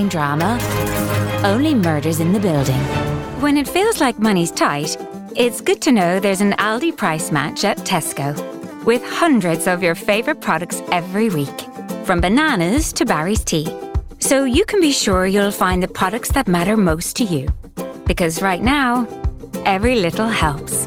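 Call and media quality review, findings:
Call bitrate drop, 15.08–19.15 s. Bandwidth estimate collapsed and the Opus encoder was throttled; the coarser, rougher sound fits a fall from around 128 kbps to about 25 kbps, held at the floor for roughly 4 s. Fewer bits force heavier quantisation, so detail smears into a watery texture, and at this rate the encoder trims the high band, leaving the audio muffled until the estimate recovers near 19.15 s.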